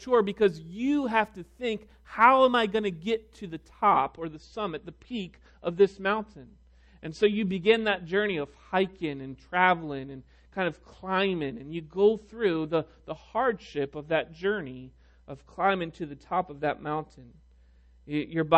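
From 3.92 s to the end, the stream drops to a lower bitrate: the treble abruptly thins, with nothing above about 8.3 kHz, and swirly codec artefacts rise, fitting a fall to roughly 32 kbit/s. Unlike a dropout or buffering stall, the switch is instant and leaves no gap.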